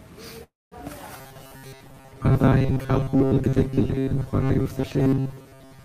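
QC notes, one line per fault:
0.43–0.75 s, call audio freeze: the sound stalls here and the gap gets filled with a continuation of whatever was playing last, a short buzzy tail that fades out and leaves about 210 ms of silence before things pick up again. Packets were likely held up in transit until the jitter buffer ran dry. Nothing seems lost, since the audio resumes right where it stopped, but everything after it now runs about 282 ms late.
1.17–5.85 s, robotic sound from repeated short buffers: from here to the end the speech turns into a stiff, metallic buzz pinned at 134 Hz, still loosely tracking the words. That fixed pitch fits a repeat period of roughly 7.5 ms. The likely cause is new audio arriving too rarely, so the playback keeps looping that tiny slice instead, and around 70 percent of what you hear is repeated material.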